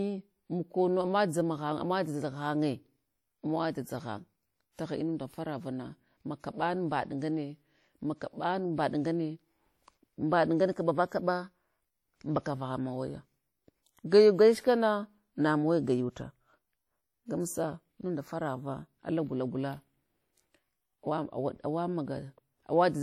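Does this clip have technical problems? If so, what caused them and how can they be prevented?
Yes. Throughout the speech there's a ringing, washy smear with a hiss that swells and fades with the signal, likely WMA compression. Noise from long transform blocks spreads over tens of milliseconds, fitting roughly 48 kbps, though content reaches 20.1 kHz. Encode at a higher bitrate or use a better codec.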